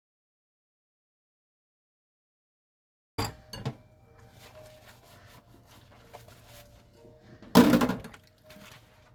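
From the very start until 3.18 s the audio is a dropout to silence: the file opens already in the gap, with plain silence rather than any background or room tone, and the sound then begins abruptly at 3.18 s as if joining mid-flow. The likely cause is a lost input, such as a disconnected device, a failed link or an accidental mute, while recording or encoding carried on writing silence. Whatever occurred during those first 3.18 s is not recoverable.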